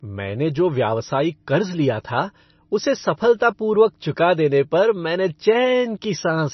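MP3 compression runs throughout: the speech stops sharply at 6 kHz and sounds watery and swirly, likely from a starved encoder at a very low bitrate dropping weak frequency lines.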